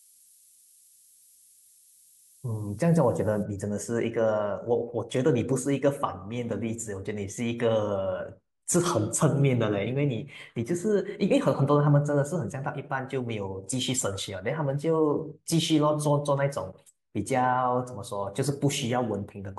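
Low bit depth with noise shaping runs from 0.0 to 3.43 s. The speech here is carried by only about 8 bits, so every sample is rounded coarsely. Each rounding error is fed back and used to push the resulting noise up the spectrum. This leaves a steady, thin hiss sitting only around 20 dB below the speech, climbing steeply in brightness toward the top of the band.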